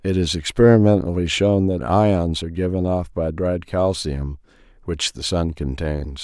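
Nothing in this speech recording stands out as a technical fault; it runs along without any glitch, dropout or hiccup worth pointing to.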